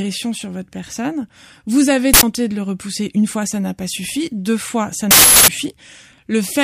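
At 2.14 s, just before "de le repousser une", and again from 5.11 to 5.48 s after "suffi deux fois ça", the speech hits an uninitialised buffer: leftover memory plays as a loud digital noise burst. The bursts last 93 ms and 372 ms, matching 4096- and 16384-sample blocks. That whole-block length sets them apart from a single-sample click.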